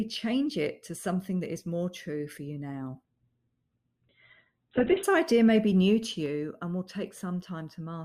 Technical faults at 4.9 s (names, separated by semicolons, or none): adaptive stream at a lower bitrate